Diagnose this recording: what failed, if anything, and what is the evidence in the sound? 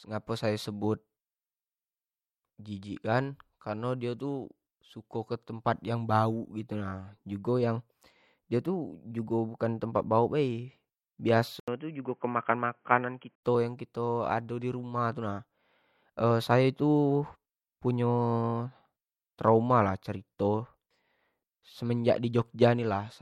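From 11.60 s to 13.43 s the speech abruptly loses everything above 3.2 kHz and turns dull and boxy, entered through an 80 ms silence, with a different background hiss sitting roughly 45 dB below the speech and no obvious change in loudness. At 13.43 s the full bandwidth returns. The fault sits at the driver and device stage: the likely cause is an input switched to a poorer device, such as a headset's narrowband call profile, before routing returned to the original microphone.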